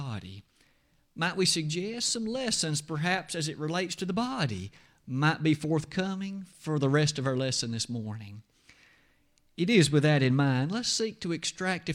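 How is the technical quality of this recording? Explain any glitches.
Listening through this speech recording, nothing stood out as a technical problem or glitch.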